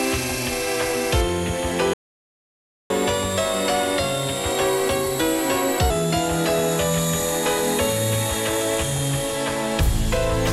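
A playback stall silences the audio from 1.93 s to 2.90 s, a break of about 0.97 s, most likely because the player's buffer ran dry or its output thread was held up. Unlike a dropout, where material goes missing, the sound simply stops, so the gap is dead air inserted into the stream. Catch-up at higher speed follows from 2.90 s to 5.90 s. For those three seconds the audio runs at 1.1 times normal speed, and because it is sped up by resampling, the pitch rises by roughly a semitone and a half along with the tempo. That link is what distinguishes it from a pitch-shift fault, which changes pitch without changing timing. The player is working through the backlog left by the stall, and once the catch-up ends, speed and pitch both return to normal together.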